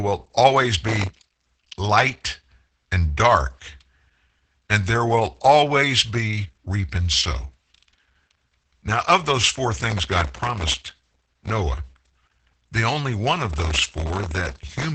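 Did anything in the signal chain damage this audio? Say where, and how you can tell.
Yes. At the codec stage, Opus voice compression runs through the whole clip. Speech is muffled, hoarse and faintly robotic, with nothing above 8.9 kHz. That fits SILK in wideband mode at a very low bitrate, around 10 kbps. Unlike the bursts below, this damage is constant.

At the driver or buffer stage there is processor overload crackle: gritty tearing from 0.87 to 1.17 s just before "light and", from 9.90 to 11.50 s after "of those four", and from 13.53 to 14.85 s after "the only one of". Dense runs of hard-edged repeats of stale audio point to tiny buffers, well under a millisecond, missing their deadlines, not isolated dropout clicks.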